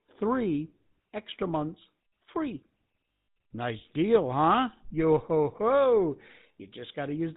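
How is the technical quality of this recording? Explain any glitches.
The technical quality is poor: the whole recording is coloured by low-bitrate telephone coding, with one brief dropout partway through.

Throughout, the speech sounds buzzy and gravelly with nothing above 4 kHz, the signature of the GSM full-rate codec, which rebuilds speech from sparse pulses and fits a 13 kbps stream.

From 3.19 to 3.26 s, just after "three extra months free", the sound freezes into a rough metallic ring. These are lost GSM frames, patched by repeating the last good frame.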